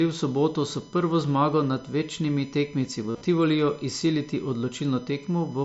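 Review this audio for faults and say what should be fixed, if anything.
A USB whine runs through the whole speech clip: a fixed-pitch tone based on 1 kHz, with its strongest component up at the 14 kHz harmonic, sitting roughly 25 dB below the speech. The USB bus draws current in regular 1 ms frames, and that periodic load leaks into the audio through shared power or ground, producing a steady whine at the frame rate and its multiples. Powering the audio interface separately or breaking the ground loop with an isolator would prevent it.

Concealed Bluetooth headset packet loss occurs from 3.11 to 3.22 s, just after "zmago nad večnimi tekemci". The dropouts are scattered across about 105 ms, totalling 82.5 ms of missing audio, which fits roughly eleven lost headset packets, with the longest continuous gap at 37.5 ms. The receiver filled each gap by repeating the best-matching stretch of the preceding waveform, so the passage takes on a buzzy, held tone with a slight warble where real speech resumes. 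The mSBC link adds light graininess on loud sounds. Keeping the headset close to the phone and away from 2.4 GHz interference would prevent the losses.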